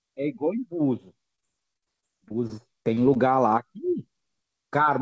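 From 1.36 s to 3.28 s the speech breaks into repeated packet loss with a robotic sound. About a dozen short holes, the longest roughly 50 ms, are each patched by stretching the last sound forward. That fills about 246 ms, roughly 14% of the stretch. The repeated, buzzy smearing sets it apart from a single clean dropout, which leaves silence, and from steady codec coarseness. The band stops at 8 kHz, which fits a wideband call codec such as G.722.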